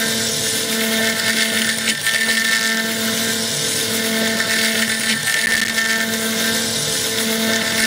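From 5.46 to 5.71 s a burst of gritty crackle tears through the sound, a rapid string of tiny silent holes with hard edges. This is processor overload crackle: the processor missed deadline after deadline, some fifteen in all, the length of each hole fitting buffers of about 5 ms.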